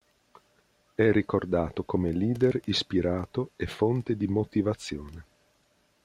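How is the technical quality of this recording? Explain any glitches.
The technical quality of this recording holds up, with no glitches to explain.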